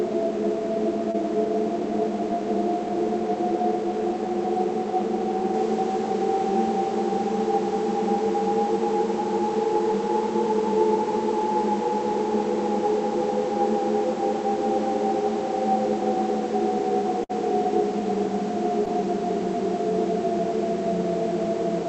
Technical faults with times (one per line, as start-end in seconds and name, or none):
1.11-1.16 short concealed packet loss
17.24-17.31 burst of packet loss
18.85-18.88 short concealed packet loss